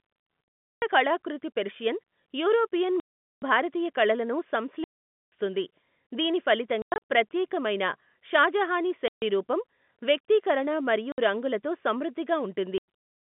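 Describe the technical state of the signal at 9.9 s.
At 9.9 s the speech comes through intact, with nothing wrong beyond the ordinary narrow telephone band of G.711 coding, which here spans roughly 150 Hz to 3.5 kHz.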